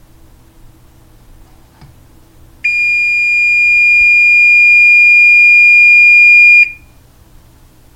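No technical faults can be heard anywhere in this audio.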